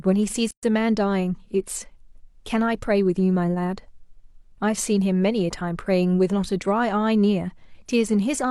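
At 0.51 s the speech drops into a silence of about 123 ms, ending at 0.63 s. This is a gap at a join of encoded pieces. Separately encoded sections were spliced untrimmed, leaving encoder delay and end padding. The edges are smeared, and the speech resumes where it stopped.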